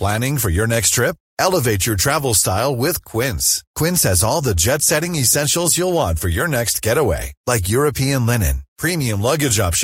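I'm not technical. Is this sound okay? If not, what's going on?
Yes, it sounds fine: nothing stood out as a problem while listening to this recording.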